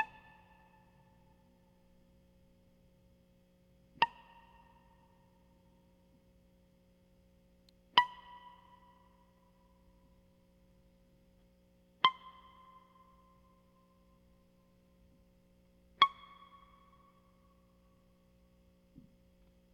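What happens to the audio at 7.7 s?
At 7.69 s a single faint, sharp snap sits on top of the music, a brief electrical switching spike that peaks very low, around -45 dBFS. It is most likely a nearby switch, motor or static discharge arcing, with the audio line picking up that burst.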